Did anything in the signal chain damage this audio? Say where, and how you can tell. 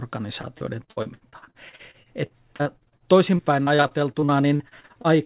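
Yes, the network: repeated packet loss from 0.41 to 5.07 s, 36 gaps up to 67 ms, each patched by extending prior sound, so speech turns choppy and robotic.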